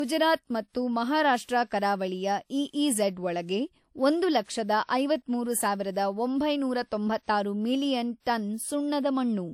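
Throughout, the speech has nothing above 18 kHz and smeared detail, likely low-bitrate audio saved at a high bitrate, the MP3 re-encode keeping the earlier losses.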